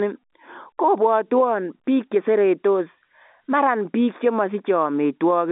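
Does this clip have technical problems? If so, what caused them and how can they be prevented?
No, there are no technical problems in this speech.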